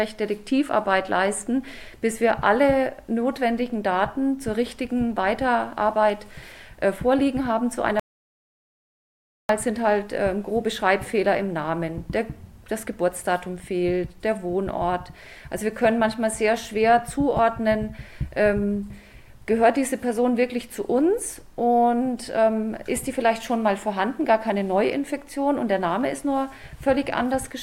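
At 8.00 s the audio drops out to silence and stays there until 9.49 s, leaving a gap of about 1.5 s. The cut is abrupt on both sides: the sound stops mid-flow and resumes mid-flow, and the gap holds silence with no room tone or noise floor underneath. That points to the recording chain writing silence while its input was gone, most likely through a momentary disconnection, link failure or mute. Whatever occurred during those 1.5 s is not recoverable.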